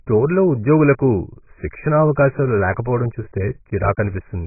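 From start to finish the speech sounds dull and smeared, with nothing above about 2.5 kHz and a warbly texture. That's heavy damage, likely from AAC compression at a very low bitrate, around 12 kbps, where the encoder cuts the top band and starves the rest.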